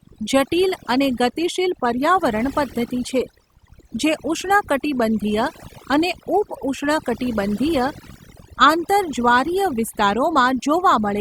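Overdone noise removal runs throughout: a heavy-handed noise reducer cuts frequency bands near its noise estimate, leaving a lowered, twinkling background.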